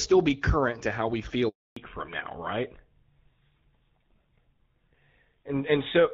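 A speech recording, heard through a phone call, breaks up at 1.49 s, right after "current to how we". This is a handover gap. The call is passed from one network to another, and no speech frames arrive while the link switches. The sound fades out within a few tens of milliseconds. It stays silent for 280 ms, until 1.77 s. Whatever was said in that stretch is simply missing. When the sound returns, the call has made a fallback to narrowband. Before the gap, the audio carries the fuller band of the AMR wideband (HD Voice) codec, with only light coding roughness, consistent with a rate near 12.65 kbit/s. From 1.77 s to the end, nothing above 4 kHz survives. That cut-off points to an older narrowband codec such as GSM full rate. The voice sounds duller and rougher, and the crisp high consonant detail is gone.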